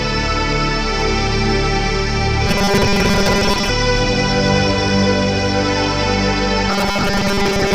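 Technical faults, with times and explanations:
2.47 to 3.70 s and 6.70 to 7.75 s, robotic sound from repeated short buffers: the music collapses into a rigid, metallic 200 Hz buzz that only loosely tracks it. Most of the audio here is likely a repeated 5 ms fragment, filling gaps while real audio is skipped.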